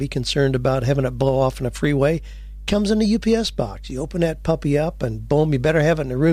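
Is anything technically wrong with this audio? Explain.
Yes. Mains hum runs under the speech for the whole clip: a steady low drone at 50 Hz with a few low harmonics, sitting about 15 dB below the speech. A ground loop or nearby transformer is bleeding the power-line frequency into the signal.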